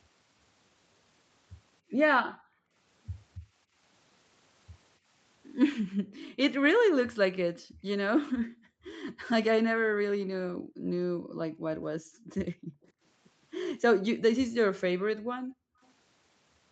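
The room background drops away at 2.25 to 2.75 s, 3.39 to 3.79 s, 5.83 to 6.38 s, 7.31 to 7.83 s, 8.32 to 8.85 s, 9.7 to 12.83 s and 14.85 to 15.81 s. This is background gated by the echo canceller. It turned the microphone down hard while the far end played. Most dips reach about 40 dB. The one at 3.39 s is shallower, about 21 dB. At 12.83 s, for about 60 ms, a very faint delayed copy slips through. It sits 280 ms behind the speech. This is likely an echo leak, with the canceller missing part of the loudspeaker sound as the long gate lets go.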